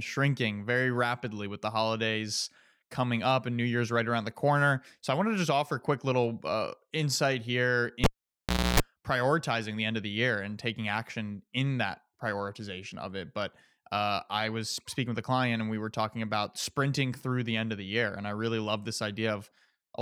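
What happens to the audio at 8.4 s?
At 8.4 s you're in the middle of a cable pulled and plugged in, running 8.04 to 8.80 s: a pop, about 0.71 s of near silence that includes roughly 0.29 s of 60 Hz mains buzz while only the tip touches, and a second pop as the connection returns.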